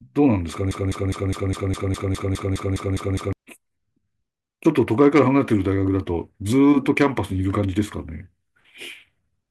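A speech clip with a broken-record loop from 0.71 s to 3.33 s. A fragment about 205 ms long repeats exactly, back to back, 13 times. The result is a rapid stutter that holds for over two and a half seconds. The likely cause is a stall in the player, encoder or stream, which kept sending the last fragment it held. The speech that belonged in that stretch is missing.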